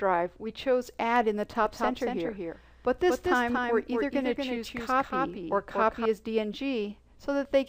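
From 1.66 to 6.06 s a doubled audio track appears: a copy about 5 dB quieter trails roughly 200 ms behind, likely from a second capture path. The waveform shows offset twin envelopes, and the spectrogram shows each onset repeated at full bandwidth.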